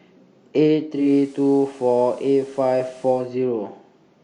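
A speech clip in which a hybrid receiver is heard with digital radio blending to analogue. At 0.9 s the sound cross-fades over about a quarter of a second to the FM broadcast, with a level shift of about 1 dB and hiss rising to roughly 30 dB below the speech. It returns to digital at 3.34 s. On a spectrogram the section shows a raised, even noise floor across the band. A waveform shows a slightly thickened baseline between phrases.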